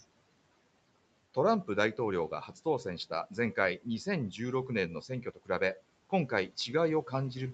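From 5.08 to 5.78 s, the noise suppressor cuts speech. It mistakes quiet parts for background and lowers them by up to about 17 dB, roughly a fifth of a second in total. Those parts sound swallowed or faint. The waveform shows sudden dips, and the spectrogram shows faint, gapped speech bands.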